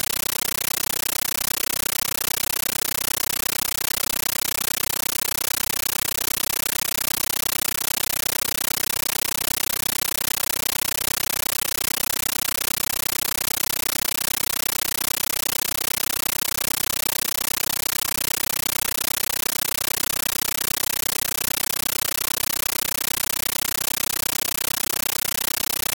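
A compressed stream played as audio: an AC-3 (Dolby Digital) bitstream, apparently at a high bitrate, is passed through as if it were ordinary samples and never decoded. The sounds are lost for the whole clip. Instead, 13.3 ms bursts of noise, separated by silent padding, repeat 31.25 times a second as loud, chattering static.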